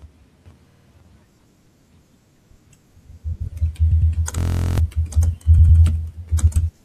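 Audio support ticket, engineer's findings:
Repeated frames, 3.91–4.12 s and 5.58–5.79 s: compressed stream wrote a 104.5 ms block twice more, so speech stutters, replays, and runs 209 ms long each time.

System hang loop, 4.38–4.78 s: driver froze while hardware cycled a 23.22 ms ring buffer, consistent with 1024 samples. Steady 43.1 Hz buzz replaces roughly 0.4 s of speech.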